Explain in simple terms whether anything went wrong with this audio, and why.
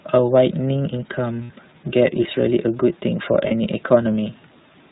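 The speech has passed through the iLBC codec, a phone-line voice coder. It cuts everything above 4 kHz and rebuilds the voice in short chunks, so it sounds clear but slightly rough and synthetic. Plain muffling would dull the sound without adding that artificial, buzzy grain.

There are also lost iLBC frames at 1.44 to 1.50 s and 3.47 to 3.52 s. Instead of silence, the decoder repeats a bit of the last sound, giving a brief held, buzzy vowel. These gaps fit two lost 30 ms chunks and then one, and the voice recovers immediately afterwards.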